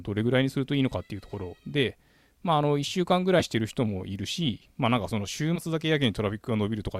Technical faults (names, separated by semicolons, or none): compressed frames skipped